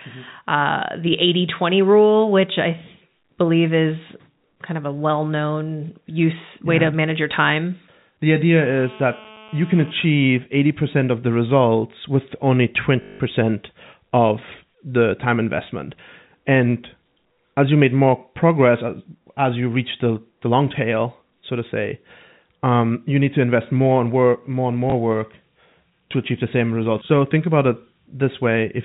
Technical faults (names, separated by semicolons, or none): GSM phone buzz; packet loss with last packet repeated